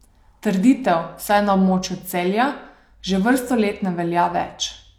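No technical faults can be heard anywhere in this speech recording; the signal stays continuous and intact throughout.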